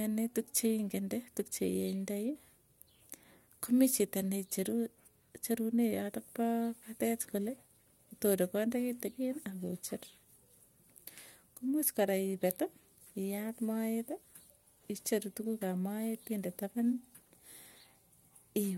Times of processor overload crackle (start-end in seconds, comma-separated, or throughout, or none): none